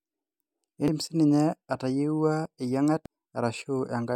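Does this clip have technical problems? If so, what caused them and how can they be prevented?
Yes. Two brief glitches at 0.88 s and 3.06 s come from damaged data in the compressed stream. Part of the encoded speech was corrupted in storage or transfer, so the decoder misread those frames, lost sync and searched for the next valid frame header. Each lasts only a few milliseconds. Using checksummed or error-protected storage and transport, and verifying files after copying, prevents this.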